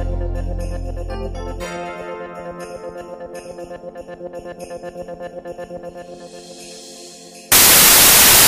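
The final stretch of the audio, from 7.52 s to the end at 8.48 s, collapses into loud broadband hiss, a case of samples built from the wrong bytes. The reader is misassembling each sample, so the rapidly fluctuating low-order bits land in the most significant position and dominate the values. On a spectrogram this shows as a flat, dense wash across all frequencies; the waveform becomes a dense block of noise.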